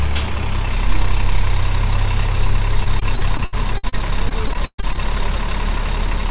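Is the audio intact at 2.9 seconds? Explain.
No. The audio is broken up by repeated packet loss (robotic sound) from 2.84 to 5.0 s. Lost packets leave gaps, the longest 133 ms. Each is patched by stretching the last sound, covering about a fifth of the span. The result is choppy and robotic.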